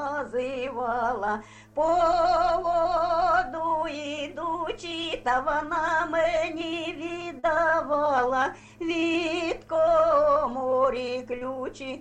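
Short concealed packet loss occurs at 7.39 to 7.45 s and again at 11.39 to 11.43 s. In each case a stretch of audio, about 40 ms in the first and 20 ms in the second, arrived too late or not at all. The receiver patched the gap by extending the preceding sound, covering roughly 36 ms and 20 ms, then crossfaded back into the real signal. Each patch is heard as a brief smear or wobble.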